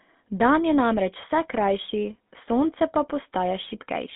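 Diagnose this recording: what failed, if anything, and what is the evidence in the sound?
Codec stage: GSM full-rate coding throughout. Its sparse pulse excitation makes the speech buzzy and gravelly, and the spectrogram shows nothing above 3.8 kHz.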